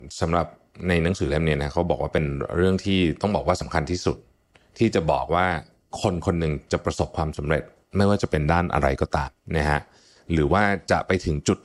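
At 3.62 s and again at 9.28 s the sound jumps forward, losing a sliver of about 20 ms and then a longer piece near 70 ms. Both are likely dropped buffers (overrun). Each shows as a waveform discontinuity and a thin vertical broadband line on a spectrogram.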